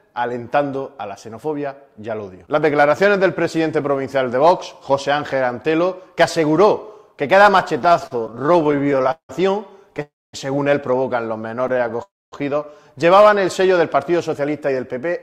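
From 7.79 to 9.31 s the audio breaks into repeated stalls (stutter): 25 short gaps, the longest 173 ms, filled with a continuation of the preceding sound, about 438 ms in all, or 29% of that stretch. Packets were arriving more slowly than they were played, so the jitter buffer kept running dry. The result drags and hiccups, with the longer gaps fading, but nothing is lost.

At 10.02 to 10.35 s a call audio freeze inserts a 314 ms hold. The last sound is extended briefly, then drops to silence for about 240 ms before the audio resumes exactly where it stopped. The likely cause is packets held up in transit, which emptied the buffer and added 314 ms of delay.

A second, lighter stutter runs from 11.68 to 11.96 s: six gaps of 16 ms or less, 62 ms filled, 22% of the span.

Another freeze follows at 12.03 to 12.34 s, a 293 ms insertion that again includes about 240 ms of silence, with the stream picking up intact afterward.

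From 14.39 to 15.10 s a jitter buffer speed-up plays the audio at 108% speed by cutting pitch-period-sized slices, around 70 ms in total, to shed excess buffered audio. Pitch stays put, but the sound comes across hurried.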